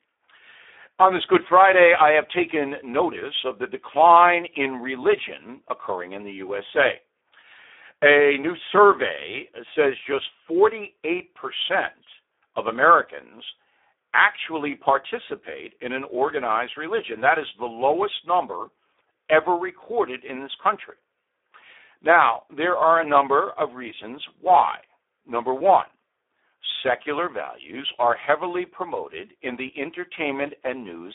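Speex codec damage runs through the whole speech clip: a narrow telephone band of about 300 Hz to 3.6 kHz, nothing above 3.7 kHz, and a hoarse, noisy texture, consistent with an 8 kbps setting that starves the excitation of bits.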